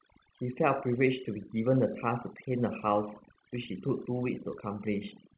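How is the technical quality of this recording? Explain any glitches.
The recording suffers from overdone noise removal, present from start to finish. A noise reduction stage was set far too aggressively, so any frequency band sitting close to its noise estimate gets pulled down hard or switched off. The quieter parts of the speech fall below that threshold and vanish along with the background noise. The gaps between phrases drop to near silence sprinkled with twinkling specks, and the voice sits in a band that stops at 4 kHz, which fits a G.711 mu-law call codec.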